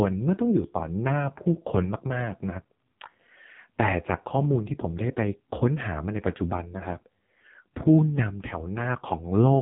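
From start to end, the speech carries AMR narrowband mobile codec damage. Nothing above 3.8 kHz survives, so it sounds thin. The damage is heavy. Few pulses drive the vocal tract model, leaving a buzzy, synthetic quality that points to about 5.15 kbps.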